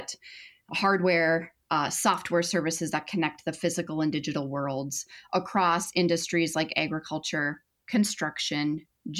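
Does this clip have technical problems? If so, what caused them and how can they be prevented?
No, this clip has no technical problems, so there is nothing to prevent.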